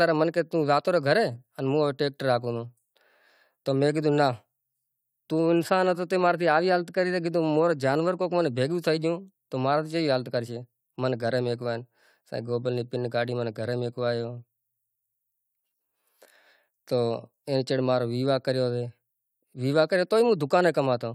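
No technical faults can be heard anywhere in the recording, with the signal holding steady throughout.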